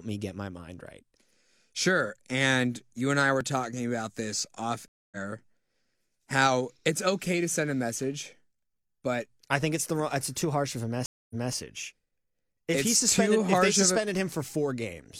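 At 4.88 s, just after "talking about this off", the speech drops out for about 236 ms and picks up slightly further along, skipping roughly 150 ms. At 11.06 s, after "too harsh of a", a 241 ms gap ends with a 232 ms stretch repeated. Both are stream reconnects: the connection broke, the player fell silent, reconnected and started a fresh decoder mid-stream, rejoining later the first time and earlier the second, where the server resent recent audio.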